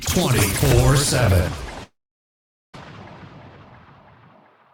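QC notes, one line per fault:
1.83–2.78 s, long network dropout: For about 0.9 s nothing new is heard. The final sound before the gap is stretched into a buzz that fades away, leaving mostly silence, which is likely the receiver concealing a stall in arriving audio. When sound returns, about 0.6 s of material is simply gone. Unlike a brief packet-loss glitch, the concealment runs out and goes quiet, and the lost stretch never comes back.
2.85–4.02 s, jitter buffer speed-up: Right after the gap, the audio runs about 13% fast for just over a second, yet its pitch stays put. The backlog from the stall added roughly a third of a second of delay, so the receiver trimmed tiny pitch-period slices repeatedly, dropping around 150 ms in total. That gives a hurried, rushed feel. Unlike resampling or a clock drift, there is no pitch rise, and unlike dropouts, nothing audibly vanishes.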